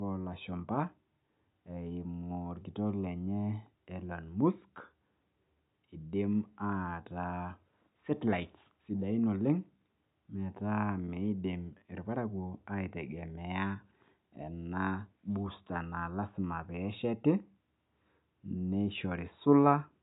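No technical faults are audible.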